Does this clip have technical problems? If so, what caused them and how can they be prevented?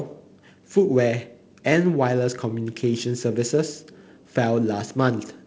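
No, the speech comes through as wideband telephone audio consistent with G.722 coding at its lower 48 kbit/s rate, with the light upper-band hiss and slightly coarser lower band that this setting brings, and nothing beyond that is wrong with the signal.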